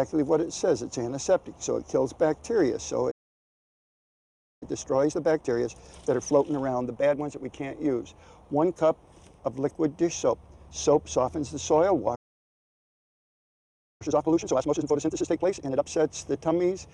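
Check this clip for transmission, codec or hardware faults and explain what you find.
Two problems show up, and they come in pairs: the playback drops out twice, and each time it then rushes to catch up.

The playback stalls run from 3.1 to 4.63 s, about 1.5 s of silence, and again from 12.15 to 14.02 s, about 1.85 s. The audio just stops mid-flow and comes back later. The likely cause is the player running dry of buffered data, or its output thread getting blocked, so nothing reaches the output until it recovers.

Right after each gap you get time-compressed catch-up. From 4.63 to 7.63 s the audio runs at 1.25 times normal speed, and from 14.02 to 15.86 s it runs at double speed. The player is clearing its backlog by snipping out small chunks and cross-fading the joins. The pitch stays where it should be, but the sound feels hurried.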